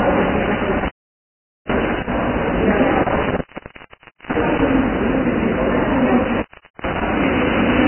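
Throughout, the sound is grainy and hissy, with nothing above 3.1 kHz. That's likely heavy Vorbis compression at a very low bitrate, somewhere near 10 kbps. From 0.42 to 2.13 s there's an intermittent contact: the line opens for about 0.81 s, and the sound breaks up with crackly edges. Another one runs from 2.95 to 4.71 s, open about 0.89 s. Inside that stretch, pre-echo puts a short hiss ahead of attacks at 3.44–3.49, 3.58–3.62, 3.66–3.70 and 3.89–3.93 s. The codec spread its noise back across each block, so each attack sounds smeared. The last contact break runs from 6.24 to 7.02 s, open about 0.42 s, with one more pre-echo at 6.74–6.79 s.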